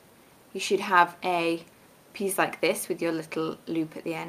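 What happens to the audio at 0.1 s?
Nothing goes wrong at 0.1 s; the audio plays through that moment intact, with no dropout, click or other fault.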